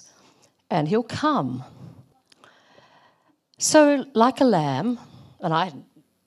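At 2.09 s the speech is interrupted by a brief glitch lasting until 2.12 s, about 30 ms. This is damaged data in a compressed stream. Some of the encoded bytes at that point were corrupted or lost. The decoder misread the affected frames and lost its place in the stream. It then had to search for the next valid frame header before playback could resume. The result is a short disruption cutting across the speech.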